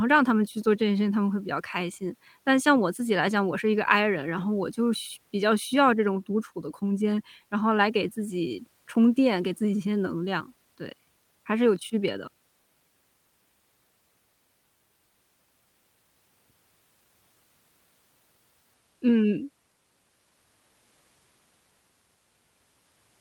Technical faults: lost packet rebuilt from error correction

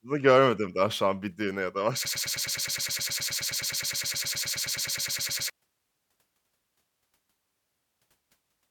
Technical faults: broken-record loop

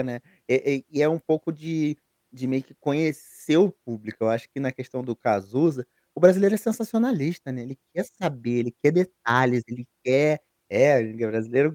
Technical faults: none

